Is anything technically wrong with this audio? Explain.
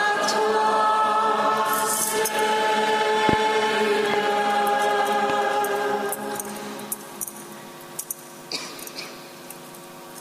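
Yes. Loud pops appear three times. At 3.29 to 3.35 s there are two in quick succession. Single pops follow at 4.14 to 4.16 s and at 5.30 to 5.32 s. Each jumps roughly 15 dB above the surrounding sound. The likely cause is a sudden voltage step or pulse from a plug, a switch, static or a driver glitch. Later circuits shape that pulse. Each is heard as a sharp pop or thump, with the audio continuing underneath.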